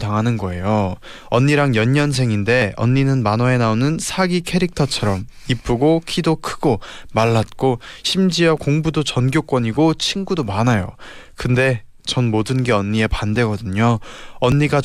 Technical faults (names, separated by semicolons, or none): audio missing between chunks